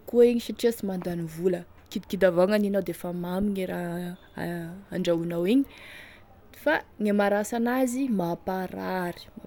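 There are no technical faults in this speech clip to describe.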